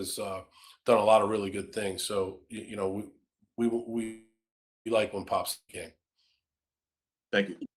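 At 4.03 s the speech stalls in a call audio freeze lasting about 0.84 s. The last sound carries on as a fading buzz that settles into roughly half a second of silence, and then the speech resumes with "like when" from exactly where it stopped. The likely cause is delayed packets draining the jitter buffer. What sets it apart from a dropout is that nothing is skipped: the gap pushes the rest of the speech about 0.82 s later.

At 5.52 s a shorter long network dropout follows, running to 5.71 s, about 0.19 s. Again the last sound is stretched into a decaying buzz, with only a brief silent tail of about 50 ms. The audio likely stopped arriving and was never recovered. Unlike the freeze, the speech comes back further along, with roughly 180 ms of it missing, so the flow jumps forward instead of simply pausing.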